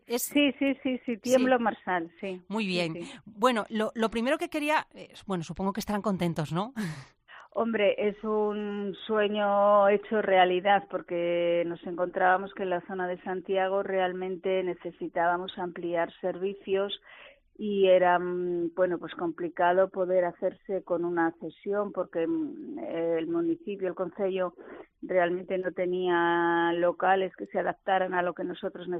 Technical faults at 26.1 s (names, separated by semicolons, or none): none